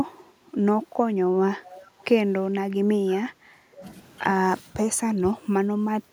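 From 1.63 to 2.05 s a faint delayed copy of the speech trails behind it, about 390 ms late and roughly 20 dB quieter than the direct speech. It is an echo leak. The far end was likely playing the call on a loudspeaker, and its echo canceller let part of that returning sound pass back down the line.

The speech then sinks in level in three places: 2.68 to 3.83 s, 4.6 to 4.74 s, and 4.94 s through to the end of the clip. The longer two dip by about 20 dB for around a second of affected time each. The brief one drops about 15 dB. This is speech suppressed in double talk. Both sides were likely talking at once, and the echo canceller, unable to tell this talker from its own loudspeaker echo, pulled everything down.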